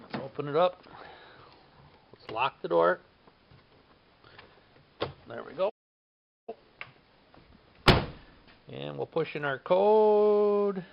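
At 5.69 s the sound stops dead and stays silent until 6.49 s. This is a playback stall of 0.78 s, likely caused by the player running short of data or being blocked. The waveform drops to a flat line and the spectrogram shows an empty vertical gap.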